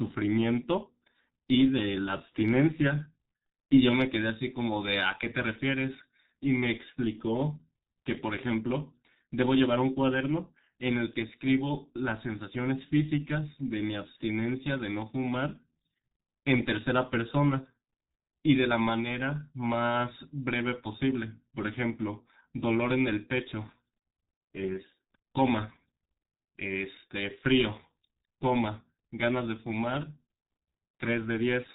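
Throughout, the speech sounds muffled and hoarse with smeared consonants: heavy G.723.1 codec damage, whose coarse 30 ms frames at roughly 6 kbit/s discard everything above 4 kHz.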